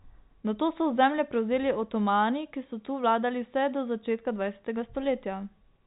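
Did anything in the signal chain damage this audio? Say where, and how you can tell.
No, nothing damaged it.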